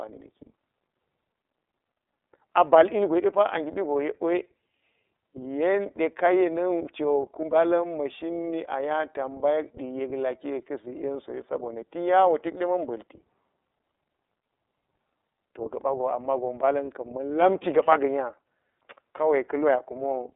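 Throughout, the iLBC codec removes everything above 3.8 kHz. Unlike plain band-limiting, it adds a rough, synthetic edge from coding each 30 ms frame independently.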